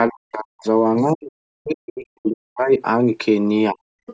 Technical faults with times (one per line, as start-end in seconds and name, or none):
0.08-0.65 speech suppressed in double talk
0.98-1.04 other side's voice leaking through
1.12-2.81 speech suppressed in double talk
3.71-3.79 speech suppressed in double talk
4.06-4.13 other side's voice leaking through